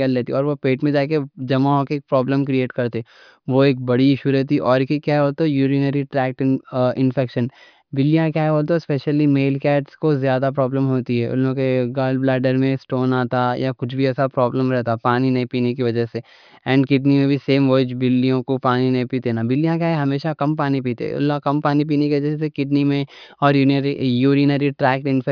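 No technical faults detected.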